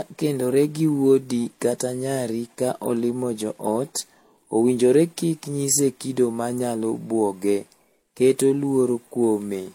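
From start to finish, the speech carries a layered coding damage whose likely cause is transcoding between lossy codecs: nothing is heard above about 16.2 kHz, and several distinct kinds of artefact sit on top of one another. Their mix points to an MP3 stage, then a Vorbis stage, then a low-rate HE-AAC stage. A single codec pushed to a low bitrate would leave one consistent artefact character, not this mixed one.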